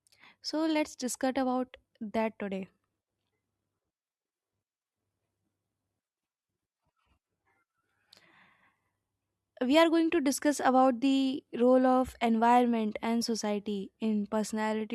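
No technical faults are audible anywhere in the recording.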